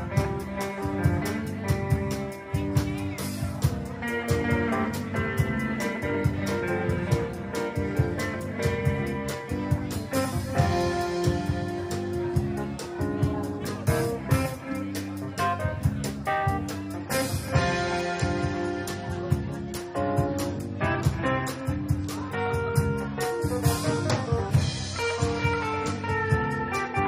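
At 16.93 s, through to the end, the adaptive stream falls back to a lower bitrate, consistent with roughly 96 dropping to 32 kbit/s AAC: a sudden gapless drop in quality, with swirly codec artefacts.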